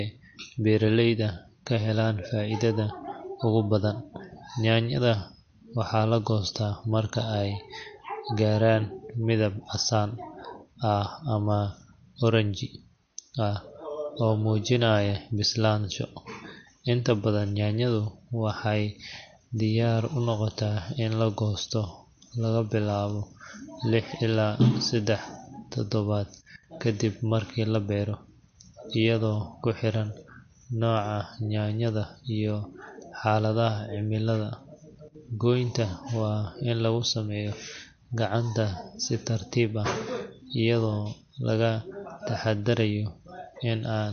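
From start to finish the speech carries plainly audible MP3 compression artefacts, likely from a low-bitrate encode, roughly what you'd expect around 48 kbps. Nothing survives above 6.5 kHz, so the top is dull, and dropped weak frequency lines flicker in and out, giving a watery swirl and chirpy s sounds.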